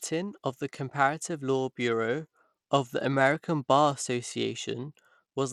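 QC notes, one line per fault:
Throughout, Bluetooth SBC compression: the speech carries a gritty, grainy noise, and the upper treble thins out and flickers. The likely cause is a starved SBC link. Its eight broad sub-bands share too few bits, so the weak top bands drop out and the rest are coarsely quantised, with damage that fits about 96 kbps. Unlike AAC-style swirl, the grit isn't masked under louder sound, and aliasing rides along.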